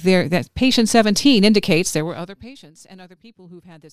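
A level drop of roughly 25 dB from 1.96 to 2.54 s is applied in coarse steps, around a hundred a second, causing zipper noise: a fine ticking buzz riding the fade.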